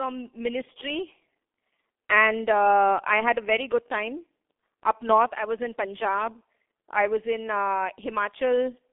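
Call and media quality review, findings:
G.723.1 codec damage, heavy, present throughout. Speech muffled and hoarse. Consonants smeared together. Audible band limited to 250 Hz to 3.5 kHz, nothing above. Probable component: the G.723.1 telephony codec. Mechanism: long 30 ms frames and a slowly updated vocal model, with too few bits to carry detail. Sound fits a rate of roughly 6 kbit/s. Roughness constant from start to end.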